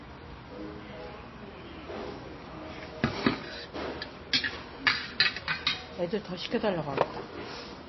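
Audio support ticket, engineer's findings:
Throughout: band stops dead at 5.8 kHz, watery swirl on top; likely MP3 compression at a bitrate near 24 kbps. The swirl rules out a plain low-pass filter.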